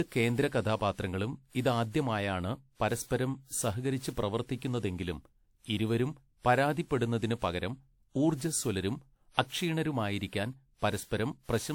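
Throughout the speech, the sound has a swirling, smeared and hollow quality, with blurred consonant attacks and nothing above 20 kHz. This is generation loss, likely from around seven rounds of lossy re-encoding, which fits a WMA chain at 96 kbit/s.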